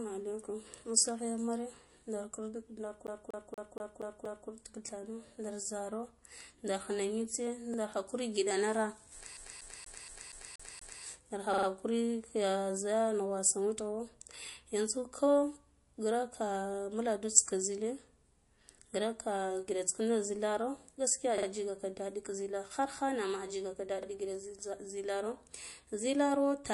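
A lossy encoder likely working at a low bitrate, near 48 kbps, has thinned the whole clip with MP3 compression. Nothing sounds above 11.3 kHz, so the speech is dull, and plainly audible watery swirl and metallic chirps on s sounds run throughout.

From 3.07 to 4.49 s the playback gets caught like a CD stuck on one turn, jumping back over the same 237 ms section six times with a brief mute at each jump before "tidhano nda zaro ndar" follows. The result is an even, rapid stutter.

At 7.74 s new audio failed to arrive in time, so a repeated buffer of 46 ms, which fits a 2048-sample buffer, plays once more with a hard join. It is heard as a short stutter.

From 9.37 to 11.03 s the same CD-style skip returns, looping a 237 ms section seven times with a mute at every jump.

The buffer repeats then recur: from 11.54 to 11.67 s the 46 ms piece plays three extra times, from 21.38 to 21.47 s twice more, and at 24.03 s once more, each as a short stutter with hard joins.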